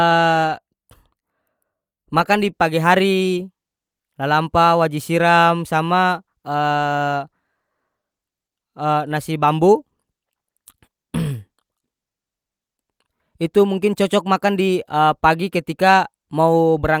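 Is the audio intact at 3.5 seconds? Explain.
Yes, at 3.50 s the speech plays through cleanly, with no dropout, click, distortion or other break to be heard.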